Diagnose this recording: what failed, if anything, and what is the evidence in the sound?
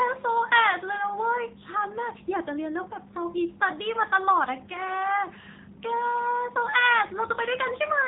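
The codec stage failed: the whole recording carries AMR narrowband mobile codec damage. Nothing is heard above 4 kHz, and the speech sounds heavily buzzy and synthetic from start to end, as a vocal-tract model rebuilds it from a few pulses per frame. That fits a low AMR-NB mode around 6.7 kbps.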